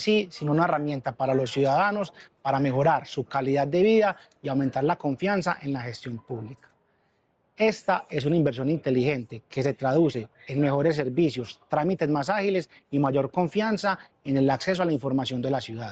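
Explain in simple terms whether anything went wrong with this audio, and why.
Nothing went wrong that I could hear: listening through, nothing stood out as a problem.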